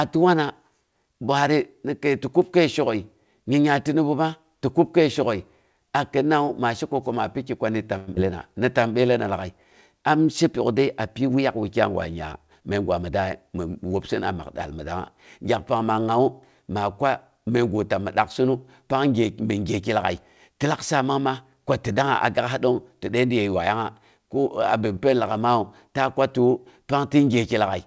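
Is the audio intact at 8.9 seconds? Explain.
No, a jitter buffer slow-down runs from 8.59 to 8.98 s, just before "lag'ai am she": repeated pitch periods add 53 ms, stretching the sound to 89% speed at unchanged pitch.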